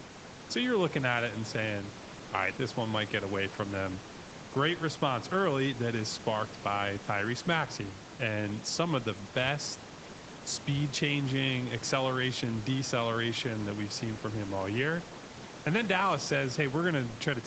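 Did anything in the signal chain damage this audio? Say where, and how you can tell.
No, the speech sits about 16 dB above the room's background noise, and its content stops at 8 kHz, which fits the call's microphone processing and the Opus codec on the call path working as designed.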